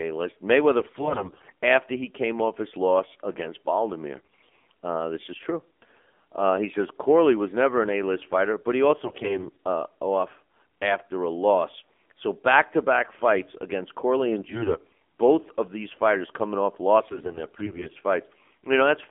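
The whole call passed through AMR narrowband mobile coding at a low mode, which fits roughly 7.4 kbps. Only about 250 Hz to 3.5 kHz survives, and the thinly coded voice model leaves the speech plainly buzzy and synthetic from start to finish.

AMR bit errors then hit five bursts, at 0.80–1.52 s, 4.18–4.51 s, 9.04–9.56 s, 14.26–14.97 s and 17.08–17.90 s. Corrupted frame bits misplace the excitation pulses and skew pitch, gain and spectrum values, so the voice turns hoarse, scratchy and gargly. The damage is worst around 4.2 s and mildest around 14.3 s.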